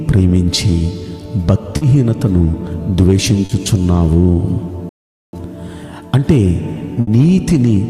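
Three quick smears at 1.77, 2.51 and 3.45 s are short concealed packet loss: the receiver papered over gaps of 40, 20 and 40 ms by stretching the last bit of sound. Around 4.89 s the audio just stops for about 440 ms until 5.33 s, a playback stall, likely the player starving for data or its thread getting blocked. Then at 7.01 s there's a burst of packet loss: about 60 ms goes missing, filled with a continuation of the previous sound that fades before the audio picks up further along, with that stretch gone.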